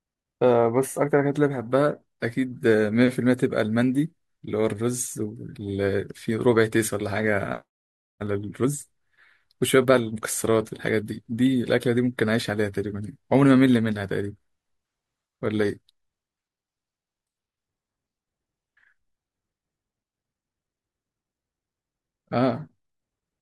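No technical faults are audible in this speech recording at any point.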